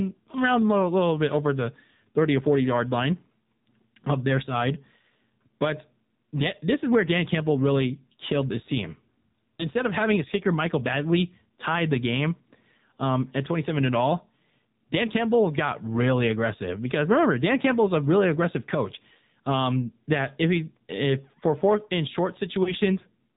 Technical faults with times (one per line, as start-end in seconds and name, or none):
0.00-23.37 AMR narrowband mobile codec
9.57-9.67 lost AMR speech frames
22.64-22.73 lost AMR speech frames